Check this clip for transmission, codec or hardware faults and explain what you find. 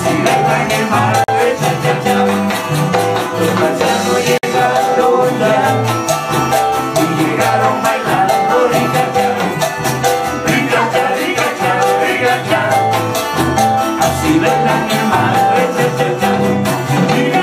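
Two short dropouts, and both sound like a Bluetooth stall. At 1.24 to 1.28 s and 4.38 to 4.43 s the audio cuts to silence for about 44 ms and 55 ms, then resumes. That's likely the headphone buffer running dry while interfered packets were resent.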